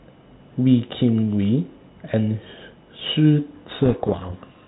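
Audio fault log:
3.8–4.68 s, codec payload misread: for the last stretch of the clip the speech is buried in harsh, grinding distortion because the decoder reads the G.726 code words with their bits in the wrong order, so each sample step is wrong and the prediction wanders. Before this the 32 kbit/s G.726 telephone sound is clean apart from light coding noise. On a spectrogram, dense broadband noise fills the band below 4 kHz and smears the harmonic striations. The waveform becomes a thick, jagged mass out to the end.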